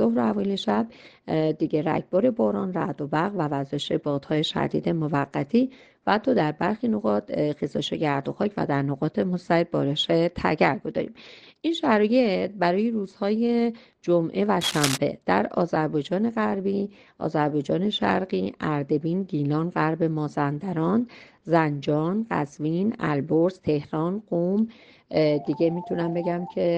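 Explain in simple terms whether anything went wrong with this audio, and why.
At 14.61 s a scratchy, rustling crackle breaks in over the sound and runs until 14.98 s, quite loud against it. That's cable scratch noise, most likely a worn lead or connector getting nudged so its contact flickered rapidly.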